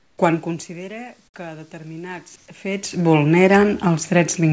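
From 0.00 to 0.18 s, the room background becomes a steady, featureless hiss, about 10 dB quieter. This is likely comfort noise in place of the background during a transmission pause.

Automatic gain rising runs from 0.43 to 3.67 s. The input dropped by about 17 dB, so the gain control added about 6 dB. Sound and background swell together.

From 2.36 to 2.48 s, the background again turns flat and featureless, this time at an unchanged level.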